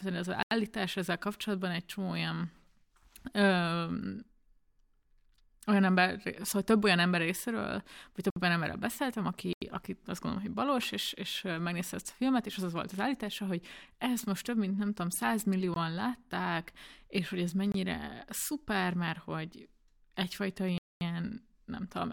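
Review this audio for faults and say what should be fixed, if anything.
Blocks of digital silence at 0.43–0.51, 8.30–8.36, 9.53–9.62, 15.74, 17.72–17.74 and 20.78–21.01 s drop the speech straight to silence and back. The two 85 ms holes fit an unfilled 4096-sample buffer. Giving the audio thread more processing headroom would prevent these underruns.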